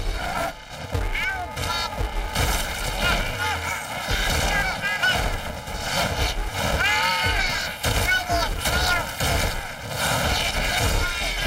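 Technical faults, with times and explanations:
Throughout: planar audio read as interleaved. Each 2.67 ms block, which fits 128 samples per channel, is played as two double-speed halves, left then right. Blocks this short leave a robotic buzz at the 375 Hz block rate rather than an audible octave shift.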